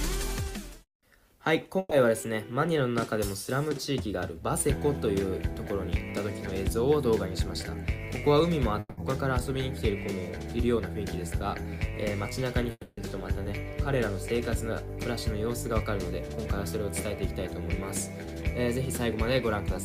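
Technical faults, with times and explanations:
1.79 to 1.93 s, burst of packet loss: a run of audio never arrived in time, so for about 120 ms the receiver keeps extending the last sound it had, letting it sag in level, and this ends in roughly 10 ms of silence. The sound then picks up again from a later point, with about 120 ms of the original simply gone, giving a short smeared stall followed by a jump.
8.79 to 8.99 s and 12.71 to 12.99 s, long network dropout: in each, the audio freezes into a fading continuation of the last sound, about 180 ms at the first and about 260 ms at the second, then drops to roughly 30 ms of silence before resuming further along, with the same span of material missing. The likely cause is a stretch where nothing reached the receiver and it had to conceal the gap.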